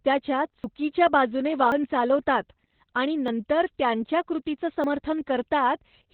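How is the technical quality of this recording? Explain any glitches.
The technical quality is poor. The speech is heavily compressed for its whole length, and four skips break it.

Opus voice compression runs throughout. The sound fits Opus in its SILK voice mode at about 8 kbps, in narrowband. Nothing sits above about 4 kHz. At that rate the coder keeps only the basic shape of each 20 ms frame and approximates the rest coarsely. The speech sounds muffled and hoarse, with a slightly robotic edge.

Four dropped buffers (overrun) occur, at 0.64 s, 1.72 s, 3.28 s and 4.84 s. The one at 1.72 s comes just before "चालवतात आणि". The one at 3.28 s falls between "चालवतात आणि" and "त्यांच्या कृतीचं". The last follows "त्यांच्या कृतीचं". Each is a sudden jump forward in the sound. There is no gap of silence. The likely cause is audio that wasn't collected before the hardware overwrote it. About 40 ms goes missing at three points, and about a tenth of a second at 1.72 s.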